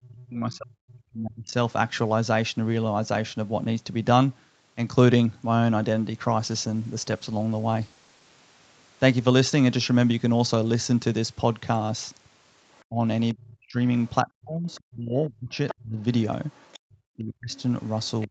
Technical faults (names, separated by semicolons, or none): speech suppressed in double talk; call bitrate drop; other side's voice leaking through